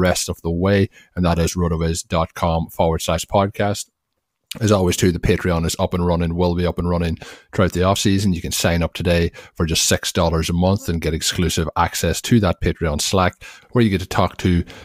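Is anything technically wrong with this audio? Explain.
No, nothing technically wrong turns up on listening; the speech comes through without any audible fault.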